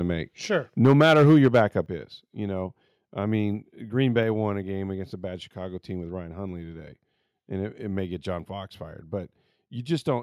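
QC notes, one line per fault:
0.84–1.61 s, microphone overload: the loudest syllables come out with a harsh, crackly edge, running about 7 dB past full scale, with around 7 percent of samples flattened. The input level was likely set too high, so peaks hit the converter ceiling, just before "is you know I".
0.86 s and 1.86 s, microphone volume stepped down: the whole level, voice and background together, drops abruptly, by about 2 dB and then about 6 dB, the second right before "is you know I". That's likely the call software cutting the mic gain after it saw those clipped peaks.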